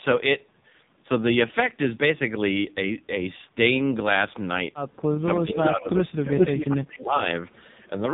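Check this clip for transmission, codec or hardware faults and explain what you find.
Three kinds of fault are present: heavy low-rate mobile codec damage throughout, and, late in the clip, speech suppression during double talk and leaked echo.

AMR narrowband mobile codec, throughout: The speech was coded at 8 kHz sampling by a vocal-tract model fed with sparse pulses. The low rate this implies fits 5.9 kbps. Nothing above about 3.8 kHz survives, so the voice sounds muffled, buzzy and synthetic.

Speech suppressed in double talk, 5.17 to 6.39 s and 6.62 to 7.24 s: The echo canceller, likely unable to tell the near talker from the loudspeaker echo while both sides spoke, turned the signal down. The speech dips by up to about 25 dB for roughly a second, then by about 20 dB for around 0.7 s.

Echo leak, 5.91 to 5.98 s, 6.38 to 6.65 s, 6.93 to 6.99 s and 7.51 to 7.89 s: A loudspeaker's echo, likely not fully cancelled, was sent back about 0.41 s late. 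It returns as short scraps at about 25, 20 and 35 dB below the speech. At 6.38 s it is about 5 dB louder than the speech.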